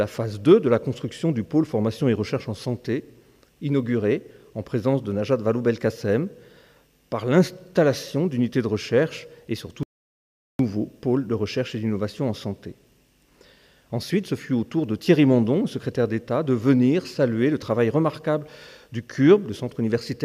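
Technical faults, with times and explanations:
9.83 to 10.59 s, audio dropout to silence: the sound cuts off abruptly and returns mid-flow after about 0.76 s of silence, with no room tone underneath. The input was likely lost briefly while recording continued writing silence, so that stretch is gone.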